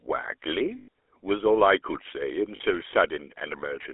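Throughout, the speech carries the buzzy, gravelly roughness of the GSM full-rate codec, consistent with a 13 kbps coder that rebuilds the voice from a vocal-tract model and a sparse pulse excitation. On a spectrogram, energy sits between 300 Hz and 3.4 kHz, with coarse, smeared harmonics.

From 0.78 to 0.88 s, lost GSM frames leave a gap of about 100 ms. The decoder repeats the last good frame, producing a rough metallic ring, and the waveform shows a repetitive stretch. A shorter 40 ms loss at 2.56 to 2.61 s gives a brief similar ring.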